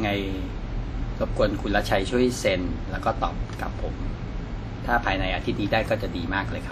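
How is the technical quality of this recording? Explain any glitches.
The technical quality is compromised throughout by plainly audible codec damage across the whole speech clip.

From start to finish the clip has the sound of likely WMA compression. A simple transform encoder working in long blocks smears its quantisation noise over tens of milliseconds, so each syllable carries a ringing, washy halo and a hiss that swells and fades with the speech. Nothing is present above 14.6 kHz, and the extent of the damage fits a low bitrate of around 48 kbps. Unlike steady background noise, this hiss breathes with the signal, and unlike plain low-pass filtering, it adds smearing rather than simply dulling the top end.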